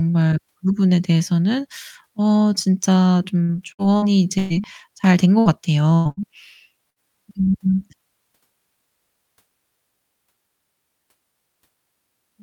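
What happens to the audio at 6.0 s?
A burst of packet loss runs from 5.94 to 6.08 s: about 120 ms of speech vanishes, and the concealment stretches the preceding sound into a fading tail instead of leaving silence.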